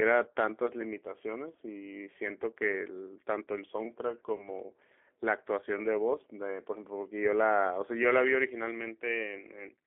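The whole clip runs through the G.729 codec, narrowed to roughly 300 Hz to 3.5 kHz, with plainly audible roughness that fits an 8 kbit/s G.729A link. At 4.36 s there's VoIP packet loss concealed by the speech codec: about 30 ms went missing, likely a single packet. The decoder stretched the last sound into a fading buzz or coloured noise, and the speech stays weak until about 4.48 s.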